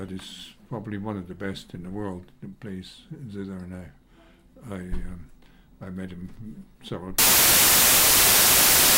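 Right at 7.18 s the audio flips into loud, harsh broadband noise and stays that way to the end. That's samples built from the wrong bytes: each value gets assembled with its bytes misordered or offset, so the jittery low bits dominate.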